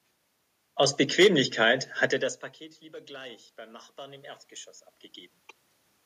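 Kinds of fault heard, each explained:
Automatic gain rising: the level creeps up about 4 dB from 3.07 to 4.33 s, room noise swelling with the voice, unlike a talker moving closer.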